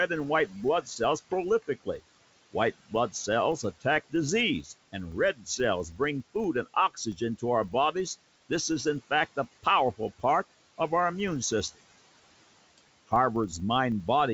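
Noise suppressor artifacts run through the whole clip. The suppressor pulls the room noise down by about 17 dB, frame by frame. That noise sits about 20 dB below the speech. Between phrases the background sinks away, then rises again under the speech. The call path's top end stops at about 7 kHz.

A filter restarted on every block is also present throughout. The filter drops its state at each block boundary and starts again from silence. Each block therefore opens with a small transient. These ticks repeat 25 times a second, which points to blocks of about 40 ms. Together they form a low buzz. The buzz gets louder and softer with the speech level.

Speech cut by the noise suppressor appears twice. From 5.33 to 5.59 s the suppressor mistakes part of the speech for noise. It turns that part down by up to about 13 dB, over roughly 150 ms. The sound there seems swallowed. From 5.91 to 6.0 s it happens again, less deeply, about 9 dB, for around a tenth of a second. 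A short stretch turns faint.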